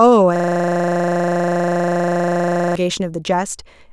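From 0.36 s to 2.75 s the speech freezes into a steady buzz at 25 Hz, one 40 ms fragment repeating about 60 times. This system hang loop means the computer stalled while the audio hardware kept replaying the same ring buffer.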